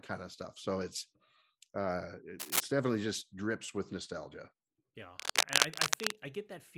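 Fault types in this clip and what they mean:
cable scratch noise: Dense, uneven bursts of scratchy rustling sit slightly louder than the speech, briefly after "uh it" from 2.39 to 2.61 s and again for about a second from 5.16 s, likely from a worn cable or connector moving and its contact resistance fluctuating.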